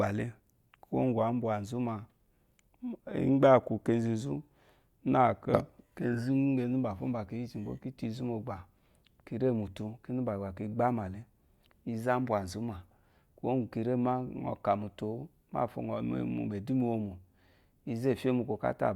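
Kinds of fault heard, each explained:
No technical fault can be heard anywhere in the speech recording; the signal stays continuous throughout.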